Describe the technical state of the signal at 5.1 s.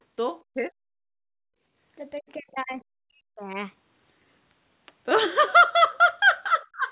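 At 5.1 s the signal is intact, with no fault: the speech carries only the narrow, telephone-style band of about 4 kHz expected from the G.711 call path.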